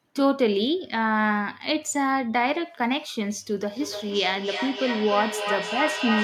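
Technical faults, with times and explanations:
3.72 to 6.23 s, feedback echo between two devices. Speech returns roughly every 300 ms, peaking about 4 dB below it. Another device's playback escapes echo cancelling.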